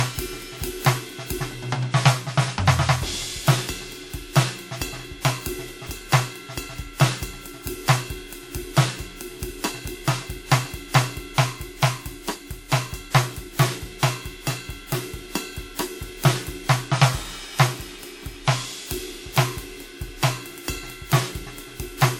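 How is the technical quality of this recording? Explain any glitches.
The music carries stacked compression damage throughout, so the technical quality is compromised. The transcoding between lossy codecs likely began with a low-rate WMA encode, then an MP3 pass. The second encoder spends bits re-encoding the first one's artefacts and adds its own, and nothing sounds above 19.9 kHz. Two distinct artefact flavours heard together set it apart from a single poor encode, which fits roughly 64 kbit/s then about 97 kbit/s.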